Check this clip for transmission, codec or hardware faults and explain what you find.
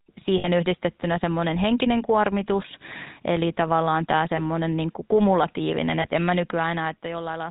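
Three faults are present in this speech clip: GSM full-rate coding throughout, lost GSM frames at three points, and a loudspeaker feedback squeal over the last part.

Throughout, the speech has been carried by the GSM full-rate codec at 13 kbps. It rebuilds the voice from a vocal-tract model driven by a sparse, regularly spaced pulse excitation and discards everything above 4 kHz. The result is a plainly audible buzzy, gravelly roughness and a dull, narrowband sound.

Lost GSM frames occur at 0.38 to 0.48 s, 4.36 to 4.41 s and 6.02 to 6.08 s. Where frames failed, the decoder reused the last good frame's settings, so the sound briefly freezes into a rough, metallic ring. The first gap lasts about 60 ms, which fits three lost 20 ms frames. The other two are single 20 ms frames.

A loudspeaker feedback squeal runs from 4.68 s to the end. The microphone was picking up its own loudspeaker, and at 5.1 kHz the loop gain passed one, so that tone fed on itself. 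It swells over roughly two seconds into a piercing whistle around 10 dB above the speech.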